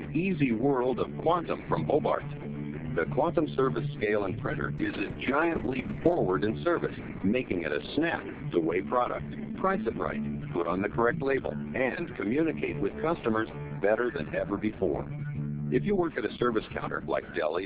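At 4.78 s the call hits a call bitrate drop. The bandwidth estimate collapses, so the encoder is forced down from a high rate to a very low one, which fits a fall from about 128 kbps to about 6 kbps. The audio turns coarse and watery, and the top end is cut off at 8 kHz instead of reaching 20 kHz. The sound stays at its roughest for about 1.4 s, then clears at 6.25 s as the bitrate recovers.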